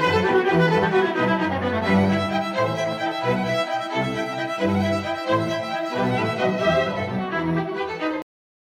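At 8.22 s the music suffers a cut-off end: the final buffers of audio were never written out or sent to playback, so the stream simply stops partway through. The music halts abruptly in the middle of a sound rather than fading or ringing out, and the remaining 0.46 s or so is flat digital silence with no natural decay or reverb tail, giving an unfinished, chopped-off ending.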